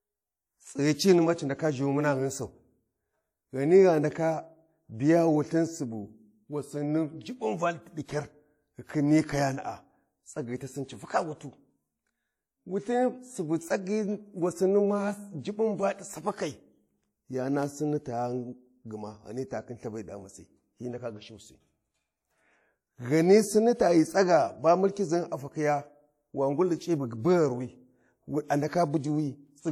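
From start to finish, the speech is likely low-bitrate audio saved at a high bitrate. A heavily compressed earlier encoding, which fits a WMA file at roughly 48 kbit/s, was re-encoded as a larger MP3. The generous second encoding cannot restore what was lost, so nothing sounds above 17.2 kHz.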